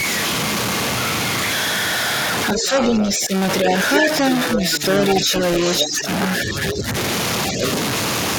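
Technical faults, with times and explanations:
Throughout: stuck bit. There's a distorted, noisy edge on the speech the whole way, and the pauses carry a gritty noise floor instead of going quiet. That's likely one data bit held at a fixed value, knocking about half the samples off by that bit's weight.
2.51–3.27 s, 3.94–5.97 s, 6.66–6.74 s and 7.61–7.68 s: echo leak. A delayed copy of the speech trails the original by roughly 155–160 ms, about 5 to 10 dB down, loudest in the long middle stretch and the last brief scrap. It's likely a loudspeaker-to-microphone path the echo canceller didn't fully clean out.
2.53–6.87 s and 7.52–7.63 s: speech suppressed in double talk. The talker dips in level while both sides talk at once, by about 10 dB at worst. The drops add up to around 1.5 s in the first span, and there's a shorter, roughly 5 dB dip near 7.6 s. The likely cause is the canceller mistaking overlapping talk for echo and turning everything down.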